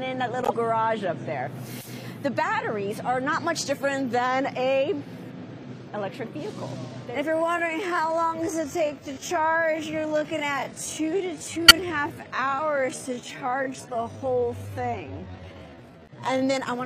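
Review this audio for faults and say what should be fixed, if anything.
Corrupt frames were decoded at 0.41 to 0.52 s, 11.68 to 11.71 s and 13.29 to 13.32 s. Each is a short chirp or burst of misplaced energy. The loudest is at 11.68 s. The first reaches about -10 dBFS and the last stays lower at about -25 dBFS. Their lengths fit a few damaged codec frames each: about three, five and two. Flipped bits garbled gains and spectral codes, and the decoder played the result instead of concealing it. Unlike a click from a dropout, each event has frequency-smeared content lasting a frame or more. Validating frame checksums and concealing failed frames would prevent this.

A time-stretched section runs from 7.28 s to 16.46 s, slowed to about 0.59 times normal speed while the pitch stays put. The pace drags because short pieces are being repeated to fill the extra time, which is likely the work of stretching software fitting the audio to a length. 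What tells it apart from a sample-rate or playback-speed error is the pitch, which holds steady instead of dropping with the tempo. Avoiding automatic length-fitting, or using the original unstretched take, would prevent it.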